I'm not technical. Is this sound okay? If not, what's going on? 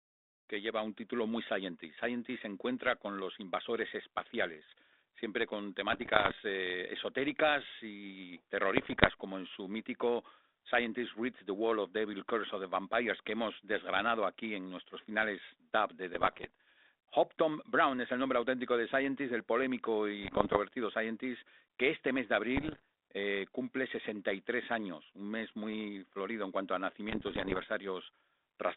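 No. The speech has bursts of bit errors on an ADPCM link, the kind of digital phone connection a cordless handset uses. A few bits of the data were corrupted, and because the decoder builds each sample on the last, every mistake throws it off for a moment. You hear pops and short rough, crackly patches where the level jumps. These occur at 5.92 to 6.34, 8.75 to 9.11 (after "eh esotéricas y"), 16.14 to 16.50, 20.22 to 20.58, 22.56 to 22.82 and 27.08 to 27.66 seconds.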